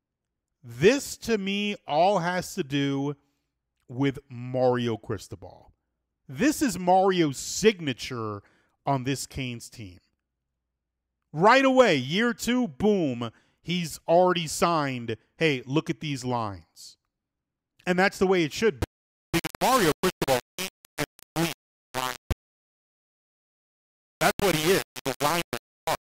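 From 18.81 s, after "the way it should", to the end at 26.09 s, the speech turns harsh and grainy. The grit tracks the speech. Quiet parts sputter or drop out. This is low bit depth without dither, likely rounding to 3 bits, with error only about 10 dB down.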